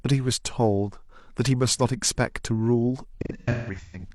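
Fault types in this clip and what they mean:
AAC frame loss with concealment: from 3.12 to 4.08 s, lost AAC frames totalling about 0.6 s, in runs of up to roughly 150 ms, are filled in by the decoder from the last good spectrum, leaving smeared, noisy, phasey patches in the speech.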